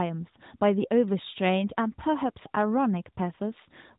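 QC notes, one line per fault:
Nothing here needs flagging, just speech with the narrow, phone-call sound of a mobile speech codec, which keeps nothing above 4 kHz and leaves only a light trace at a rate that fits 12.2 kbps.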